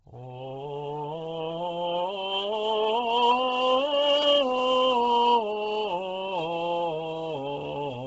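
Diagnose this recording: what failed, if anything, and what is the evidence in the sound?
Codec stage: throughout, the music stops at 7.8 kHz with grainy, noise-filled upper bands, unlike a plain low-pass roll-off, likely Bluetooth LC3 compression near 16 kbps.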